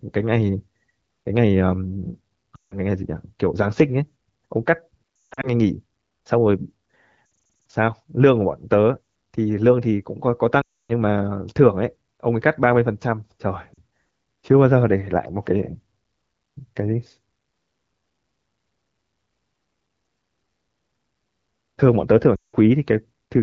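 Radio errors corrupted AMR wideband frames in this speech recording, causing lost AMR speech frames at 2.55–2.77, 5.20–5.49, 7.57, 10.62–10.92, 13.73–13.79 and 22.35–22.56 s. The decoder stretches the last good sound with falling gain, so the sound drops to near silence within two frames in the longer gaps before returning briefly weak.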